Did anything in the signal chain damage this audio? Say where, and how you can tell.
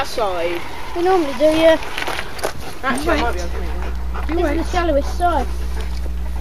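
Yes. Mains hum enters at 3.03 s and runs to the end, a steady 60 Hz tone with low harmonics sitting only slightly below the sound, roughly 5 dB down. This is the analogue wiring stage: a ground loop or nearby transformer coupling the power line into the signal.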